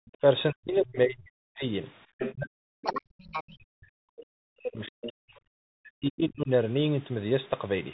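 Bluetooth CVSD headset codec runs through the whole speech clip: a one-bit delta coder at 64 kbps tracks the waveform with an adaptive step, so nothing passes above 4 kHz, s sounds turn scratchy, loud bright moments overshoot into distortion, and a grainy hiss sits underneath.

Background gated by the echo canceller opens the clip, from 0.00 to 0.16 s. The canceller clamped the microphone while its loudspeaker played, so the room tone plunges by about 40 dB for roughly a tenth of a second before recovering.

The other side's voice leaking through appears three times: very faintly, well below the talker, at 0.06 to 0.11 s; prominently, only about 10 dB down, at 2.19 to 2.34 s; and moderately at 4.86 to 5.11 s. A second voice bleeds in, likely loudspeaker echo the canceller left behind.

Speech suppressed in double talk hits 0.52 to 1.64 s, 2.34 to 5.36 s and 5.79 to 6.50 s. The talker's voice sinks by as much as about 40 dB, likely because both sides spoke at once and the canceller turned everything down.

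A playback stall cuts the sound from 2.46 to 2.84 s, a silence of 0.36 s in mid-flow, likely from the player starving for data or being blocked.

Catch-up at higher speed follows from 2.84 to 3.57 s: the backlog is resampled to play at 1.5 times speed, so the speech rushes and its pitch jumps by about seven semitones until normal speed returns.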